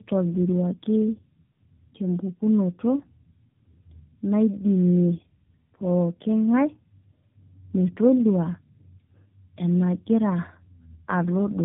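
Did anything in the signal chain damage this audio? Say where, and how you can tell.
Yes. Throughout, the speech is rough, muffled and warbly, with nothing above 3.8 kHz: tandem speech coding at the codec stage, G.729A decoded and recoded through G.711 into AMR-NB.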